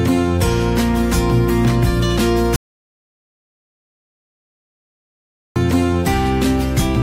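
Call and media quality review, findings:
Audio dropout to silence, 2.56–5.56 s. Sound cuts mid-flow, 3.0 s of silence, no room tone. Likely input loss upstream; recorder kept writing silence.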